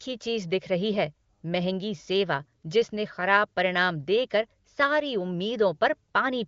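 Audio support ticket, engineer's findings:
No fault found: speech band stops at 7.4 kHz, as expected from the AMR wideband (HD Voice) codec path, with at most faint coding damage, which fits its 23.05 kbit/s mode.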